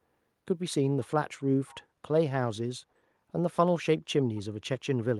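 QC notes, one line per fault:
1.38–1.43 s, echo leak: a brief, very faint copy of the speech returns about 209 ms behind the original. This is likely a far-end loudspeaker echo that the echo canceller failed to fully remove before sending back.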